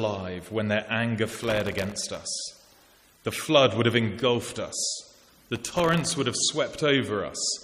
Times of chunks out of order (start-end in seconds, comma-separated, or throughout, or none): none